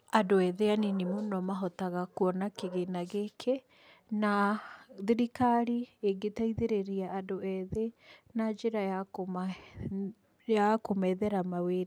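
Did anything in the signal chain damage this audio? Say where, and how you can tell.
No, nothing audible in this recording points to damage at any stage of the signal chain, from capture through to playback.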